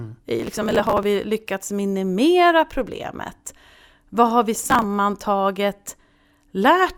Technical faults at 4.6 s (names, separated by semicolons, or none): processor overload crackle